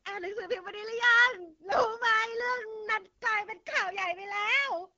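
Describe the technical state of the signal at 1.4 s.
At 1.4 s you're hearing the AMR wideband (HD Voice) codec, which runs through the whole clip. The speech has that rough, raspy edge you get at one of the lowest rates (it fits something like 8.85 kbit/s), and nothing comes through above about 7.2 kHz.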